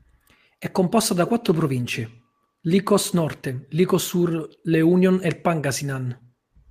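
A short speech recording with no technical faults to report. Nothing in the sound points to a problem anywhere in the recording or playback chain.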